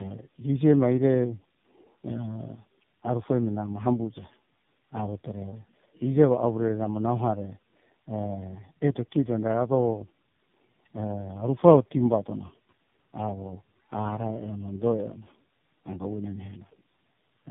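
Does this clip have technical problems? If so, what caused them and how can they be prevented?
Yes. Throughout the speech there is tandem speech coding: the call passed through three separate speech codecs in a row, each decoding and re-encoding the audio already damaged by the one before. The roughness and warble point to a chain such as GSM full rate, then iLBC, then AMR-NB at 7.4 kbit/s, with G.711 links between them. Errors stack at every step, so the speech sounds harsher, more muffled and more unsteady than any single codec would make it, with nothing above 3.7 kHz. This can be prevented by negotiating one codec end to end or using transcoder-free operation so the speech is compressed only once.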